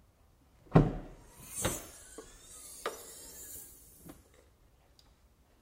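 From 2.99 to 3.99 s, a filter restarted on every block, losing its state each time; ticks recur at 23.4 Hz, which fits 2048-sample blocks, forming a level-following buzz.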